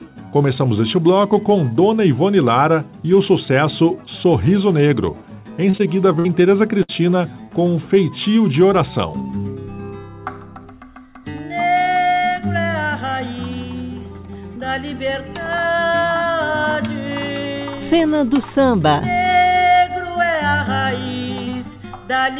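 At 5.70 to 5.75 s, and again at 5.77 to 5.81 s, there is short concealed packet loss. Small slices of the stream arrived too late to decode. The receiver covered them by extending the preceding sound, for about 33 ms and then 19 ms. Each is heard as a quick smear or wobble.

A burst of packet loss follows at 6.19 to 6.27 s, and another at 6.83 to 6.9 s. Each time about 60 ms of audio is lost. The receiver carries the last sound on and fades it, for about 53 ms and then 60 ms. It comes through as a brief held buzz or dying hiss. The audio then jumps ahead, with that stretch gone.

Throughout, nothing is heard above 4 kHz. That fits a narrowband call codec such as G.711.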